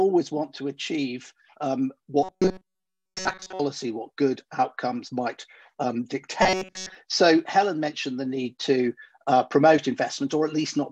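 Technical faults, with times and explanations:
2.23 to 3.60 s and 6.43 to 6.95 s, robotic sound from repeated short buffers: new audio likely stopped arriving on time, so the playback side kept refilling the gap by looping a very short stretch, about 5.3 ms, while most of the real audio, roughly two thirds or more, was skipped. That loop repeats 188 times a second, stamping a fixed 188 Hz pitch onto the sound, which becomes a rigid, metallic buzz that only loosely tracks the original.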